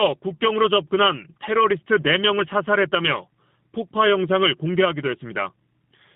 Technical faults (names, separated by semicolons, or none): G.729 codec